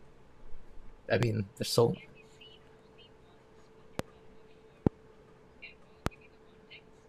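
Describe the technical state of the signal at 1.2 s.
A loud pop sits at 1.23 to 1.25 s: a single sharp click, roughly 25 dB above the surrounding speech, which carries on underneath it without a break. Its likely cause is a sudden voltage step or spike entering the signal chain, such as a connector disturbance, a switch or a static discharge, added on top of the audio. The downstream circuitry rounds that spike into a brief pulse, heard as one hard pop.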